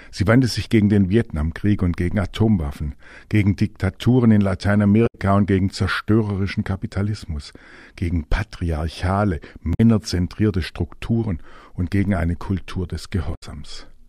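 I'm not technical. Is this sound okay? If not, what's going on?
No, there are three brief glitches, at about 5.06 to 5.15 s, 9.73 to 9.80 s and 13.34 to 13.43 s. That's damaged data in a compressed stream: a bit of the file got scrambled, the player lost its place, and it glitched briefly before recovering.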